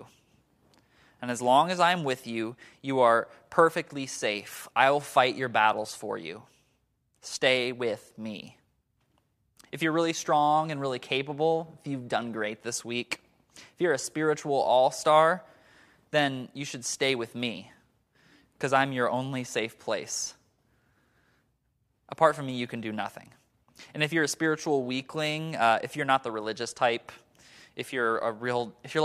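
No technical faults can be heard anywhere in the recording, and the speech signal stays intact and continuous throughout.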